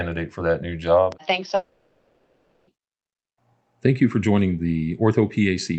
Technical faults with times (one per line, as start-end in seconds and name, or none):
1.12-1.15 loud pop
1.55-2.69 long network dropout